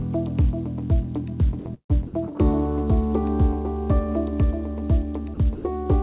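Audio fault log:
1.59–1.65 s, 5.34–5.37 s and 5.55–5.64 s, sound dropped by the voice detector: the sound gives way to brief steady noise for 60, 30 and 90 ms, then returns. A sender-side detector likely judged these moments background, so the receiver played comfort noise instead.
1.74–1.92 s, burst of packet loss: about 150 ms of sound is missing. The receiver stretches the last sound and fades it, ending in about 80 ms of near silence, before the audio resumes further on over the narrow band, capped at 4 kHz.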